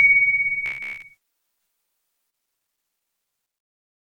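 From 0.66 to 1.02 s the sound turns into a rigid, metallic buzz at about 66.7 Hz: robotic sound from repeated short buffers, likely caused by a 15 ms chunk being replayed for most of that stretch while fresh audio was skipped. A spectrogram shows evenly spaced harmonic lines, and the waveform roughly repeats every 15 ms for most of that stretch.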